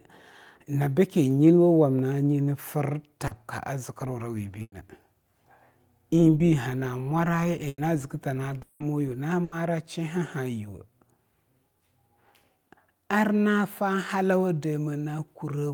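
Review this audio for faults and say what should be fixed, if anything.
Short concealed packet loss at 3.27 to 3.33 s and 6.38 to 6.42 s: 40 ms and then 20 ms of speech never arrived, and the decoder bridged each hole by extending the preceding sound. The result is a brief smear or wobble rather than an audible gap, which separates it from the bursts.

Burst of packet loss at 4.62 to 4.74 s, 7.68 to 7.80 s and 9.44 to 9.54 s: roughly 80 to 100 ms went missing each time. The receiver stretched the last sound into a fading buzz or hiss, leaving about 40 ms and 30 ms of silence at the first two before speech picks up further on.

Long network dropout at 8.62 to 8.82 s: here 180 ms of audio is replaced by a continued, decaying sound that never reaches silence before speech returns with that stretch gone. It is longer than the bursts, and a sustained network dropout is the likely cause.

To prevent all of these, stabilise the network path and add forward error correction with a slightly deeper jitter buffer so that late or lost packets can be recovered rather than concealed.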